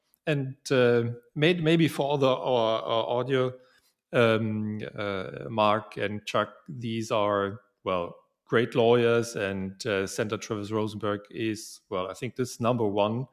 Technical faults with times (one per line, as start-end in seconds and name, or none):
3.58-3.89 sound cut by the noise suppressor
7.59-7.86 sound cut by the noise suppressor